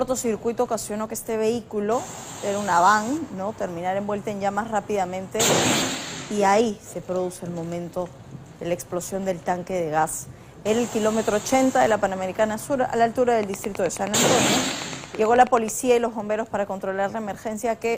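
Likely interference injecting a repeated pulse produces a train of clicks from 13.43 to 15.69 s: about twenty evenly spaced ticks at 9.3 per second, peaking roughly 10 dB above the sound.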